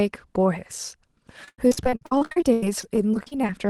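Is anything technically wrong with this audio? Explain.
Yes. From 1.44 to 3.49 s, repeated packet loss chops the speech: lost packets, gaps up to 96 ms, are patched by stretching earlier sound, leaving robotic, choppy gaps across roughly a third of that span.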